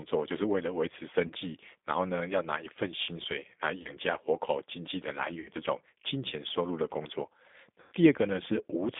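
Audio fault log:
Throughout: G.729 codec. The speech comes through a narrow line band, roughly 200 Hz to 3.6 kHz, so nothing up top survives. It's rebuilt from a vocal tract filter plus a handful of pulses, which is why it sounds a bit rough and synthetic at 8 kbit/s.
1.27 to 1.33 s, 3.82 to 3.91 s, 5.40 to 5.49 s, 7.80 to 7.93 s: VoIP packet loss concealed by the speech codec. Here the sound smears into a buzzy tone or coloured noise that fades. That's the decoder guessing from its last pitch and filter over the gaps. The sound stays weakened or distorted for tens of milliseconds or more after each gap. The gaps run from about 30 ms up to 120 ms, and the last one is the longest, which fits about one to four lost packets.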